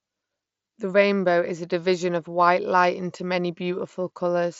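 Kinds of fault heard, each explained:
No faults are heard in this speech recording.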